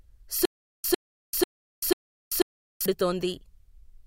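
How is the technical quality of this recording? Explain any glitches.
The recording has one clear glitch, a stutter with silent gaps between 0.45 and 2.86 s. During that span the speech is replaced by a short fragment of about 103 ms that plays, drops into roughly 389 ms of dead digital silence, then plays again, four times at a steady 491 ms rhythm, giving a mechanical, stuck-record pulse. The likely cause is a stalled player or stream that replayed its last buffered chunk at each retry before running dry, so the speech that belonged in those gaps is lost.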